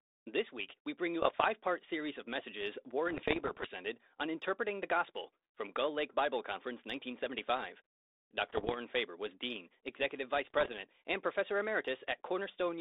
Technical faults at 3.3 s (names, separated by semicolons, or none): bit errors on an ADPCM link